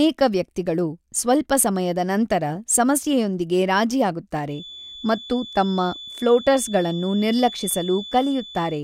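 From 4.47 s to the end of the speech, a thin, steady feedback whistle sits at 3.5 kHz, roughly 15 dB below the signal. It swells and fades slowly in level. The likely cause is a loudspeaker-to-microphone loop held just at the edge of feedback, ringing without running away.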